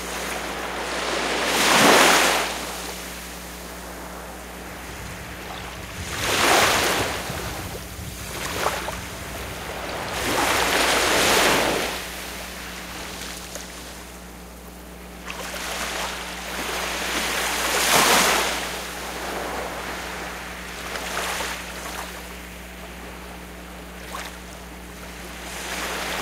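A recording of sounds with mains hum throughout: a steady 60 Hz tone, fairly loud against the sound, from a ground loop or nearby transformer. Its fixed, pitched tone sets it apart from broadband rumble.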